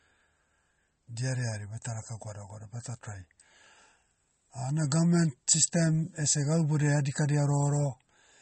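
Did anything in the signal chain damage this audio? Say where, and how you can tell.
Yes, at the codec stage: the speech carries plainly audible MP3 compression throughout. Nothing sounds above 8.4 kHz, and there's a watery swirl where weak spectral lines drop in and out between frames. That likely comes from an MP3 encode starved of bits, which fits a rate near 33 kbps.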